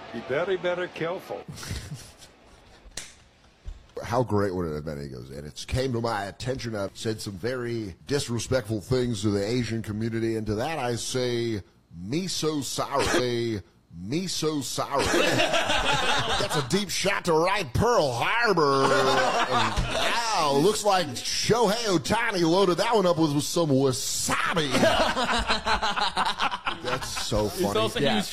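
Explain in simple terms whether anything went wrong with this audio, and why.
A stream segment was repeated: the player queued the same chunk twice, so about 2 seconds of audio, from 13.15 to 15.14 s, plays again after a small blip.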